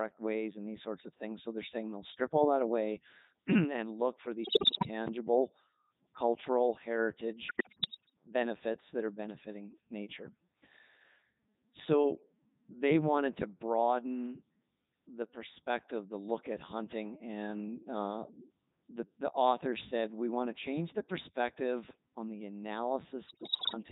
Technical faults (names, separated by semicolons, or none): Codec 2 vocoder; bit errors on digital voice radio